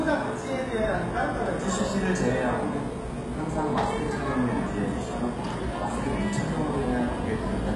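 From start to finish, the top end stops dead at about 11.4 kHz. Below that, the treble sounds synthetic. Its grain is gritty and metallic, with a lispy edge on sharp transients. The damage is heavy throughout. The likely cause is HE-AAC compression at a very low rate, one that fits roughly 12 kbps. The codec kept only the lower band intact. It rebuilt the highs by copying lower bands upward, so their harmonics no longer line up.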